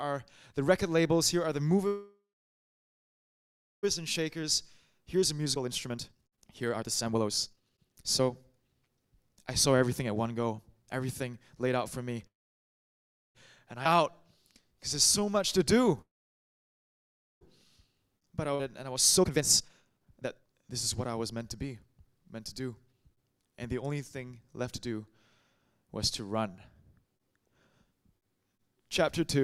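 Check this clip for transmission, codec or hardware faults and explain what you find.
The clip has four kinds of network-related fault, all typical of a packet-based call: three freezes, two stretches of hurried playback, two forward jumps and one stretch of slowed playback.

Call audio freeze: at 1.87–3.85 s, 12.27–13.37 s and 16.01–17.43 s the sound stops, its last fragment trailing off into near silence. The silent parts last about 1.6 s, 1.05 s and 1.34 s. Each gap's full length (about 1.96 s, 1.08 s and 1.40 s) adds to the delay, and nothing is lost, because the sound resumes exactly where it halted. The likely cause is packets held up in transit, leaving the jitter buffer empty until they arrived.

Jitter buffer speed-up: from 3.99 to 11.68 s the audio runs at about 125% of normal speed, and from 18.95 to 24.18 s at about 122%, hurried but at unchanged pitch. The receiver held too much buffered audio. 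It worked the excess off by cutting many tiny pitch-period-length slices, roughly 2 s of material in the first stretch and about 1 s in the second.

Skip ahead: at 13.85–13.87 s and 18.55–18.61 s playback lurches forward with almost no gap, the two sides spliced nearly directly. About 0.7 s of audio vanishes at the first point and roughly 1 s at the second. That audio was discarded, in transit or by an overflowing jitter buffer, while later audio was already queued.

Jitter buffer slow-down: from 13.89 to 15.92 s the sound plays at about 94% speed, slightly drawn out with unchanged pitch. The buffer was running short or had just raised its target delay, so the receiver rebuilt a reserve by repeating single pitch periods and pause fragments, adding about 124 ms in total.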